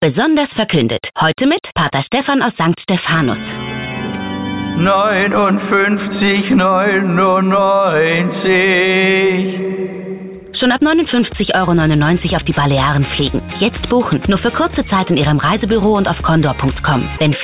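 No technical faults are audible.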